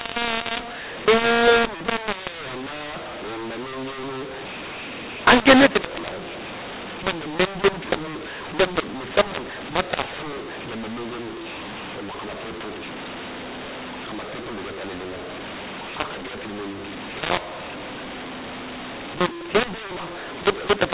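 From the first moment to the last, the speech was written as G.711 mu-law but read back as A-law, a mu-law and A-law mixed up fault. The two laws map their 8-bit codes to different levels, so every sample is misplaced: some loud, some shrunk, the faintest pushed well above silence. The speech turns harsh and distorted, pauses hiss with noise, and beneath it the 8 kHz-sampled telephone signal stays capped below 4 kHz.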